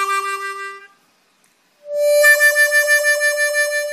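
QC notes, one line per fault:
No audible faults found anywhere in the clip.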